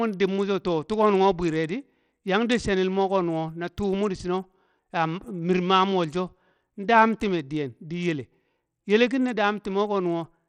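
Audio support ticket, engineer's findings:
Bluetooth SBC compression, throughout the speech clip. Top end thins and flickers; gritty quantisation noise and aliasing on the sound. Likely SBC link at a low bit pool, roughly 80 kbps: upper sub-bands starved of bits, remaining bands coarsely quantised.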